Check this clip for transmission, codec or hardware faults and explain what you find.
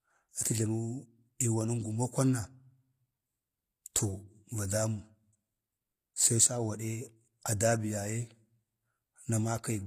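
One codec fault runs through the whole speech clip, and its damage is plainly audible. The treble stops at 14.9 kHz and sounds synthesized rather than captured, likely from HE-AAC compression at a low bitrate, which fits about 24 kbps. The encoder keeps only the lower spectrum and rebuilds the top by copying lower bands upward under a coarse envelope. Those copied harmonics don't align with the originals, so s sounds come out gritty, metallic or lispy.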